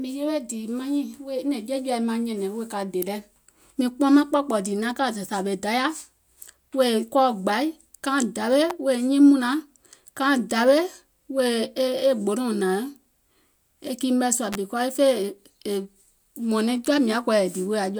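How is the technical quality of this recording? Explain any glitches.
Three brief glitches interrupt the speech. They are electrical switching spikes at 3.02 s (after "nyɛ̀nɛ̀ŋ wèè ka dè"), 8.70 s, and 14.53 to 14.55 s (after "e kii mɛ̀ sùȧ"), each a sharp snap over the sound, likely from a nearby switch arcing into the audio line.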